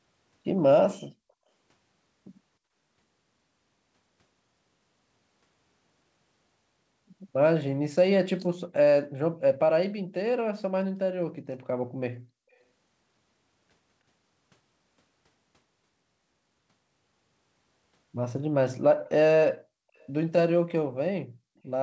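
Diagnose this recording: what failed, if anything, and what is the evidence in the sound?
Two brief, faint delayed copies of the speech appear at 19.02–19.1 s and 19.97–20.1 s, each about 310 ms behind the original and well below it, roughly 25 dB and then 35 dB down. This is an echo leak in the call processing stage, likely from a loudspeaker-side echo canceller that failed to fully subtract its microphone's pickup and sent the residue back. Room reverberation would instead give a smeared tail right behind the speech, not a discrete copy at a fixed lag.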